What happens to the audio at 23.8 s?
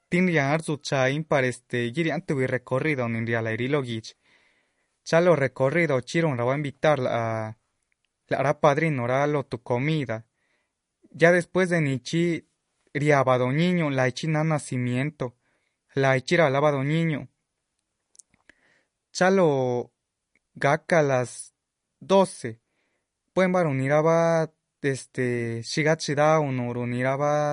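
At 23.8 s the speech carries MP3 compression damage, as it does for the whole clip. Nothing sounds above 10.6 kHz, so the top of the sibilants is cut off. Weak detail has a watery, swirling quality, and s sounds turn metallic. The damage is plainly audible. This is likely an MP3 encoder short of bits, which fits a rate near 40 kbps. It drops the treble and zeroes quiet frequency lines that flicker between frames.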